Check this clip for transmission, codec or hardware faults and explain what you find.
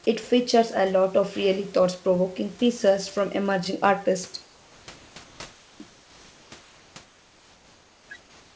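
There is one kind of fault: comfort noise in place of the background, in the pauses from 4.42 to 4.88 s, 5.24 to 5.40 s, 5.52 to 5.80 s, 5.90 to 6.52 s, 6.60 to 6.96 s, 7.04 to 8.10 s, and 8.20 s to the end. The likely cause is discontinuous transmission: the sender stops sending during silence, and the receiver synthesises a smooth, detail-free noise. Here that noise sits about 2 to 4 dB below the real room noise it replaces.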